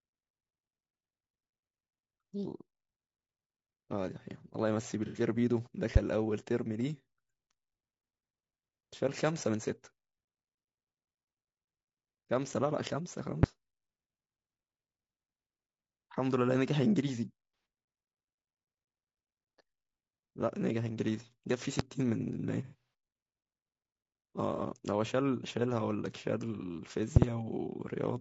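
Rough, grainy speech runs the whole way through, with a noisy fill between the voice harmonics and a dull, synthetic top band. That is the sound of low-delay AAC compression, likely AAC-ELD at a low bitrate around 32 kbps, where the short frames resolve pitch poorly and leave too few bits for clean harmonics. Brief smeared, phasey patches break the speech at 5.06 to 5.20 s (about 90 ms), 17.54 to 17.66 s (about 120 ms) and 24.56 to 24.60 s (about 30 ms), with a longer broken stretch from 22.64 to 22.82 s where about 240 ms goes missing across a 300 ms span, the longest gap roughly 150 ms. This is AAC frame loss with concealment: the decoder fills each missing stretch from the last good spectrum, so the gaps come out blurred and noisy instead of silent. On top of the speech, which carries on underneath, there are sharp single pops at about 5.96 s, 13.43 s and 21.79 s, and a pair in quick succession from 27.16 to 27.25 s. 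They peak roughly 25 dB above the speech, and about 20 dB at 21.79 s. These loud pops are likely sudden voltage steps from a plug, switch, static discharge or driver glitch, shaped by the circuits that follow them.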